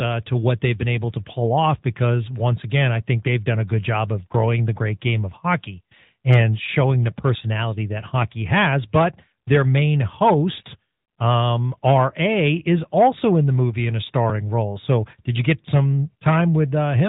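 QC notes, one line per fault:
Throughout, AMR narrowband mobile codec: the speech has been squeezed through the 2G/3G phone codec, so nothing above about 3.8 kHz survives and consonants lose their air and crispness. The vocal-tract model rebuilds each 5 ms from a handful of pulses, leaving a plainly audible buzzy, synthetic edge that fits a mid-rate mode near 10 kbps. On a spectrogram, energy stops at a hard ceiling at 3.8 kHz, with smeared, grainy harmonics below it.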